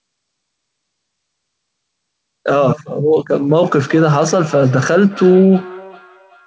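From 3.49 s to the end, the speech starts coming back at you: that's feedback echo between two devices. Two devices in the same room are on the call, so one plays what the other's mic sent, that mic hears it again, and neither echo canceller catches the other's output. Each bit returns roughly every 0.4 seconds, thinner and ringier, peaking at about 19 dB below the speech, all inside the call's 8 kHz ceiling.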